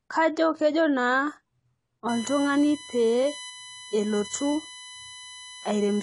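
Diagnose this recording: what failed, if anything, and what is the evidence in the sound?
The codec stage failed. Throughout the speech there is nothing above 11.2 kHz. The top octave is simply missing. The voice sounds dull and smeared, and the damage is plainly audible. Sibilants turn fizzy, and sustained sounds warble. This is likely AAC compression, in the AAC-LC form. At a low bitrate, which here fits something near 32 kbps, the encoder drops the high bands to save bits. It quantises the rest coarsely, leaving spectral holes that smear.

From 2.09 s to the end, a USB whine sits under the speech. It is a steady tone at 1 kHz, with its strongest component at 3 kHz, the third harmonic. It runs roughly 15 dB below the speech. The fault is in the analogue wiring, through power or ground. The USB bus draws current in 1 ms frames. That periodic load couples into the audio path as a fixed-pitch tone at 1 kHz and its multiples.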